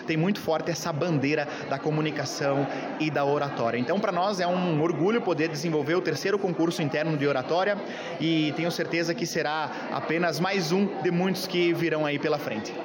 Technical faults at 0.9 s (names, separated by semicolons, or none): none